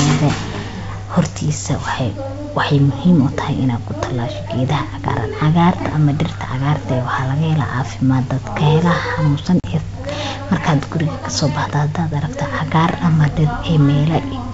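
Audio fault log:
4.68 s, 10.09 s and 13.28 s: bit error spike. Each is one sharp, broadband tick with no link to the speech around it. A flipped bit threw two or three consecutive samples far off by a power of two. They snapped straight back.
9.60 to 9.65 s: packet loss on an ADPCM call. About 40 ms of the G.722 stream went missing, which fits roughly two packets. The gap is filled with hard-edged silence. The decoder's predictor and step size then no longer match the sender's. So the speech resumes slightly distorted, before settling within some tens of milliseconds.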